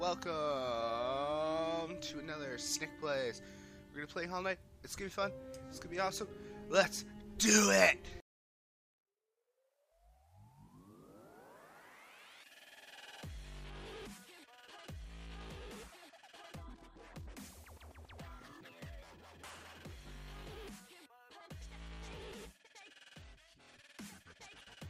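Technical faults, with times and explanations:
18.21 to 20.68 s, crude rate conversion: a gritty, inharmonic fizz rides on the louder and brighter parts of the sound, roughly 20 dB below it. Samples were repeated rather than filtered, which fits a 32 kHz to 48 kHz conversion, so the repeating pattern adds unrelated tones.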